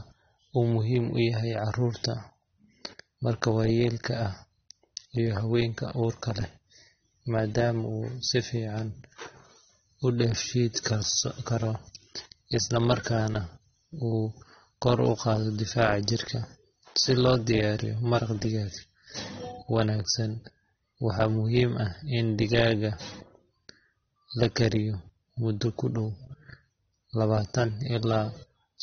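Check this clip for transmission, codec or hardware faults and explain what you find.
One codec fault runs through the whole recording: the speech has likely passed through AAC compression at a low bitrate. Squeezed into so few bits, the encoder quantises its frequency lines coarsely and drops the band above its cut-off entirely, so nothing is heard above 6.3 kHz. From start to finish the speech sounds dull and smeared, with a plainly audible warbling, fizzy texture on held sounds and sibilants, consistent with AAC-LC at around 24 kbps.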